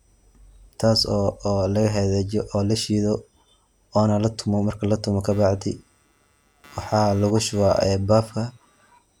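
Speech, and right after "oona latumo marki latumo" at 5.31 s a buzzy, chirping computer activity noise comes in and runs to 8.99 s. It pulses at around 150 Hz, roughly 30 dB under the speech, and tracks processor or mouse load shifting the shared ground, not the talking.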